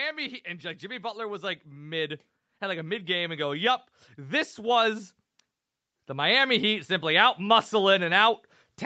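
Speech where the call's automatic gain control judged the input too quiet and kept raising its gain: by about 9 dB from 0.45 to 5.16 s, then about 4 dB more from 5.91 to 7.71 s. Voice and background swell together, within audio that stops at 8 kHz.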